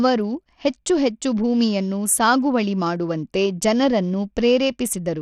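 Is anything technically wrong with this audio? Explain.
Yes. Throughout the speech there is plainly audible damage whose likely cause is Bluetooth SBC compression at a low rate, consistent with about 80 kbps. The codec splits the signal into a few wide sub-bands and, short of bits, starves the upper bands and quantises the rest coarsely. The treble flickers in and out and a gritty, aliased roughness rides on the voice. Unlike a simple low-pass cut, the top end comes and goes rather than stopping cleanly.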